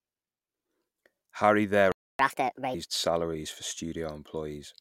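At 1.92 s the speech cuts out mid-flow. This is a playback stall. The output stays silent until 2.19 s, about 0.28 s. The likely cause is a player starved of data or a blocked playback thread. The speech then resumes where it stopped.

From 2.19 s to 2.74 s comes catch-up at higher speed. The player races through its backlog at 1.5 times normal speed by resampling. Pitch rises too, by around seven semitones, so the speech sounds hurried and chipmunk-like. The hurried words are "salaries for", and normal speed returns at 2.74 s.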